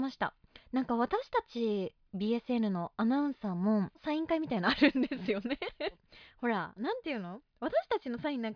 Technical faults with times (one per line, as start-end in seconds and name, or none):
none